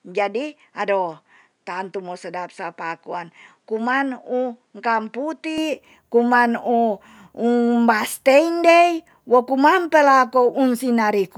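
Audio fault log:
0.0–5.58 s: likely input switched to a poorer device; speech dull, nothing above 10.3 kHz, about 5 dB quieter, faint noise floor, then clears without a gap.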